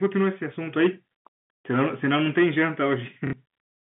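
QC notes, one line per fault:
0.03–0.28 s, 0.78–0.87 s, 1.71–2.95 s: hard clipping. Peaks driven about 4, 6 and 7 dB past full scale are cut flat. The added high harmonics give crackle.
3.27–3.33 s: packet loss with last packet repeated. A 60 ms gap, consistent with two 30 ms packets, is filled by replaying audio. The repeats produce a brief robotic stutter at about 33 Hz.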